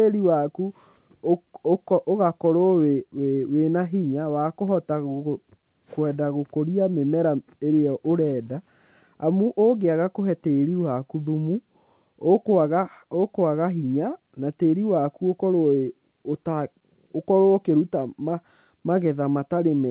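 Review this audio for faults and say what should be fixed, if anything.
Nothing needs fixing: the speech carries ordinary mu-law G.711 telephone coding at 8 kHz, so it is limited to the band below 4 kHz with the faint level-following quantisation noise that coding always leaves, and no fault can be heard anywhere in the recording.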